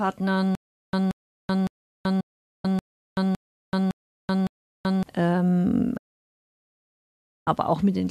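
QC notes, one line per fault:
0.55–5.03 s, stutter with silent gaps: a 179 ms burst repeats eight times, once every 560 ms, with 381 ms of digital silence between repeats. The most likely cause is a stalled player retrying and replaying its last fragment. The audio that belonged in those gaps is missing.
2.20–2.65 s and 5.97–7.47 s, digital broadcast dropout: the sound fades out over 8 ms to silence, then resumes later in the programme. The holes last 432 ms and 1.49 s. This points to runs of corrupt or lost frames being muted. Everything transmitted during those holes is lost.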